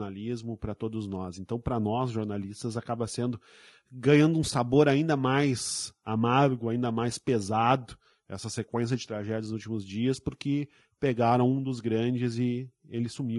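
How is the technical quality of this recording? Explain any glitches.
The speech carries plainly audible coding damage from start to finish. It sounds rough and grainy. Noise fills the gaps between voice harmonics, and the top band sounds thin and synthetic. This is likely low-delay AAC compression, AAC-ELD, with short frames resolving pitch poorly, fitting a bitrate around 32 kbps.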